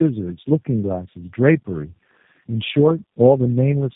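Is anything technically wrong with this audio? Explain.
Yes. Tandem speech coding runs throughout the speech: it sounds like three successive passes through a low-rate coder like G.729A, each re-encoding the previous pass's already damaged output. The errors stack, leaving speech rough, muffled and warbly, with nothing above 3.7 kHz.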